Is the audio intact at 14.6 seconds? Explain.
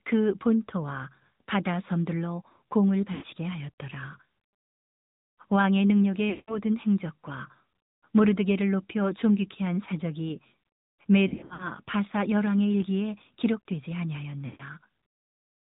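No. At 14.6 s you're inside a burst of lost AMR speech frames running from about 14.46 to 14.62 s, roughly 140 ms. The decoder keeps replaying the last good pitch and vocal-tract settings at falling gain, so the sound smears and fades toward silence before recovering a bit rough.

That moment also carries the AMR narrowband mobile codec damage present throughout. Nothing above 4 kHz gets through, and the pulse-driven vocal-tract model leaves the speech plainly buzzy and synthetic, which fits a mid-rate mode around 10.2 kbps.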